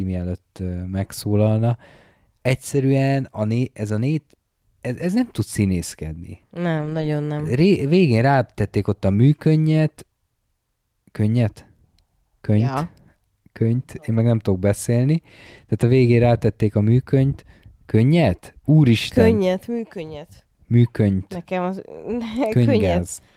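Speech, with five short stretches of lost packet rebuilt from error correction. They fall at 1.03 to 1.05 s, 2.75 to 2.77 s before "a né ez a", 6.77 to 7.07 s, 14.13 to 14.19 s before "nem tudok beszélni", and 22.43 to 22.45 s. There is no gap. Instead, each stretch sounds rougher and noisier. The decoder played low-bitrate copies carried in the following packets. The longest stretch, 160 ms, fits eight lost 20 ms packets.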